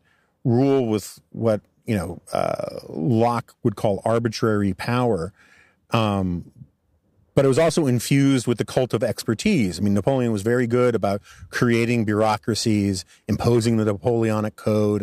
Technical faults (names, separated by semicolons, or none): none